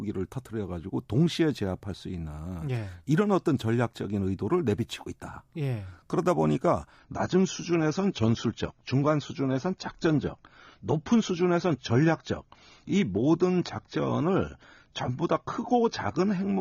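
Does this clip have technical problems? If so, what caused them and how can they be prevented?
Yes. At 6.99 s the connection slowed and the adaptive stream switched to a lower bitrate until the end. The speech loses everything above 6.9 kHz and turns dull, which fits a step down from roughly 96 to 24 kbit/s AAC. The quality changes suddenly, without a gap. A steadier connection, a larger playback buffer, or a higher minimum bitrate in the player would prevent this.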